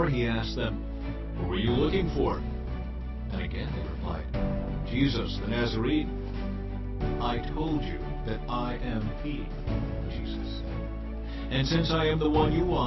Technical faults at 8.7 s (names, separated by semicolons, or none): none